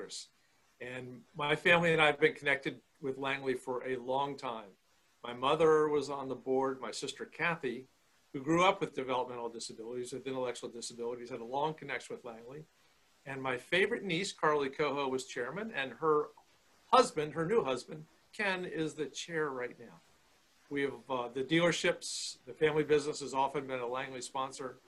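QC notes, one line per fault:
No faults found on this pass; nothing to log.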